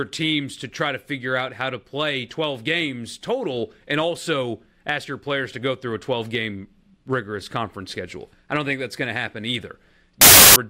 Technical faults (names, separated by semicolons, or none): samples built from the wrong bytes